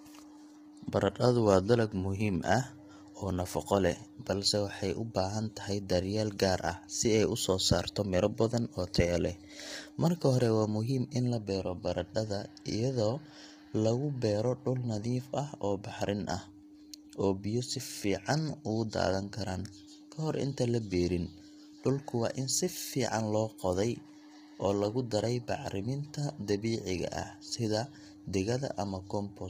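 Low-delay AAC compression throughout: speech sounds rough and grainy, with nothing above 15.6 kHz. This likely comes from AAC-ELD short frames blurring harmonics, consistent with roughly 24 kbps.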